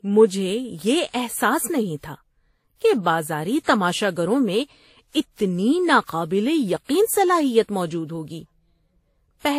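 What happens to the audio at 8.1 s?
At 8.1 s the speech has a layered, smeared coarseness, with two kinds of compression grit stacked together and nothing above 15.9 kHz, as across the whole clip. This points to transcoding between lossy codecs, likely a WMA-like encode re-encoded as Vorbis.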